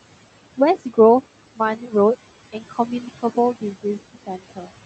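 Noise suppressor artifacts run through the whole recording. The suppressor pulls down every band it judges to be steady noise by about 16 dB, frame by frame. The room noise, which sits about 17 dB under the speech, drops away in the gaps and comes back up underneath the talking. The call path's upper limit near 8 kHz sits alongside this.

Speech cut by the noise suppressor happens twice. From 2.53 to 2.79 s, the suppressor mistakes part of the speech for noise and lowers it by up to about 10 dB, so around a tenth of a second of soft sound comes out swallowed. From 4.49 to 4.7 s, the same misjudgement goes deeper, up to about 15 dB, over roughly 150 ms. That portion sounds faint and clipped off near the end of the clip.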